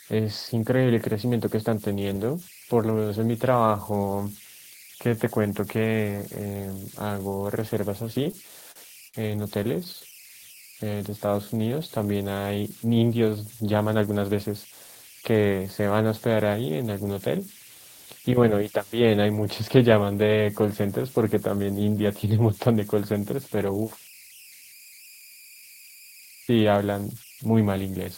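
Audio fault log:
Throughout: converter idle tones. A tone sits around 2 kHz, about 24 dB below the speech, and is easiest to catch in the pauses. It's an undithered delta-sigma converter locking into a repeating bit pattern on low-level input, which also leaves a grainy edge under quiet passages.
8.13–9.16 s and 9.64–10.31 s: repeated stalls (stutter). The receiver kept running dry as packets came in late, so it stretched the last bit of sound across each gap. That's 7 gaps in the first stretch, up to 59 ms, and 8 shorter ones in the second, none over 13 ms. Nothing is actually lost, but the speech hitches and drags.
10.48–11.99 s: jitter buffer slow-down. Right after the stutter the buffer was rebuilding its reserve by repeating single pitch periods and bits of pauses over and over, adding about 209 ms. Speech plays at roughly 87% speed with the pitch unchanged, so sounds come out drawn-out.
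13.78–15.87 s and 26.14–26.66 s: jitter buffer speed-up. The buffer held more than its target, so the receiver trimmed short pitch-period slices in quick succession, around 200 ms in the first stretch and around 50 ms in the second. Both run at about 110% speed, same pitch, and feel a bit hurried.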